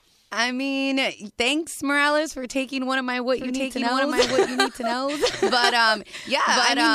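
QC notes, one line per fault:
3.39 to end: doubled audio track after "one of my what", a same-level copy trailing about a second behind, likely from a second, slower capture path.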